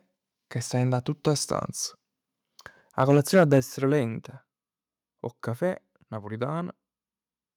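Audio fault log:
3.02 to 3.58 s, microphone overload: The loudest syllables in this stretch of speech take on a harsh, crackling edge. The likely cause is input level set too high, driving peaks about 5 dB past the converter's limit and flattening their tops on a small share of samples.
3.6 s, microphone volume stepped down: Voice and background both fall abruptly, by about 8 dB, right after the distorted stretch. This is likely the call software detecting clipping and lowering the device's input volume in a single step rather than gradually.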